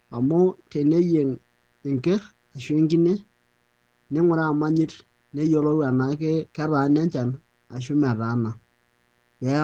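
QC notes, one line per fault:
Throughout: mains buzz, a raspy 60 Hz hum with harmonics into several kHz, about 40 dB below the speech; spectrogram shows evenly spaced horizontal lines.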